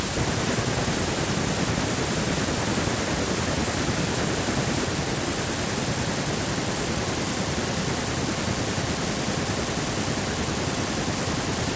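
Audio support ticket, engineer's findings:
On listening, nothing in this speech recording stood out as a problem, with the call microphone processing passing it through as expected and no content above 8 kHz.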